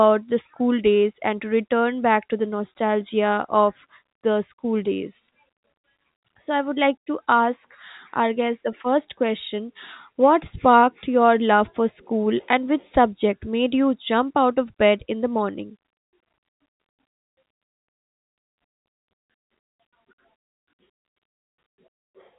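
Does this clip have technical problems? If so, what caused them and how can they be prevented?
No, the speech carries through as ordinary G.711 telephone audio, consistent with a 64 kbps mu-law stream, with its content stopping at about 3.8 kHz as that format requires, and nothing in the signal points to a technical problem.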